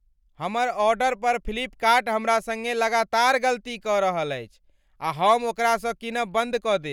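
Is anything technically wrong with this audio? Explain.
Yes. From 5.28 to 5.33 s the speech shows hard clipping: a peak runs about 2 dB past what the signal path can pass, so its waveform tops are sliced flat. Those squared edges add high harmonics, heard as a brief crackle on that peak.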